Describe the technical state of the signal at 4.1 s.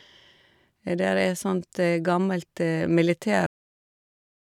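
At 4.1 s the signal is digital silence, part of a cut-off end that runs from 3.46 s to the end of the clip at 4.55 s. The speech stops abruptly at 3.46 s, mid-sound, with no decay or natural tail, and silence follows. This points to the final buffers of audio never being written to the file or sent to playback, so the recording simply ends where the data ran out rather than where the sound finished.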